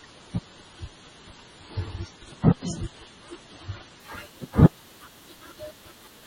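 Adaptive stream starting at a low bitrate, from 0.0 to 4.0 s: the player opened the stream on a cheap encoding so playback could begin at once, then switched up after gauging the connection. For those first four seconds the speech sounds dull and smeared, with nothing above 10.5 kHz and heavier coding artefacts, which fits roughly 24 kbit/s MP3. At 4.0 s the treble and clarity return abruptly without any gap, consistent with a step to around 128 kbit/s.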